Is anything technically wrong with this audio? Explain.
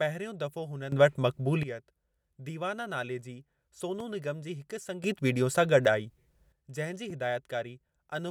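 Yes. The speech has two kinds of technical fault.

Sudden gain jump, from 0.92 to 1.63 s and again from 5.04 to 6.52 s, the second starting just after "निगम जी हिकु". In each stretch the level rises by about 12 dB and later drops back, with no transition. The speech and the background noise get louder together and then fall together. This is likely a digital gain setting or bit shift applied between one sample and the next, without any ramp.

Loud pop, from 4.00 to 4.03 s, just before "निगम जी हिकु", and from 7.10 to 7.12 s. Each is a single sharp pop, peaking a few decibels above the speech, which carries on underneath. The likely cause is a brief voltage step or pulse, from something like a switch, static or a driver glitch, entering the signal path. The circuits after it shape that pulse into a short burst.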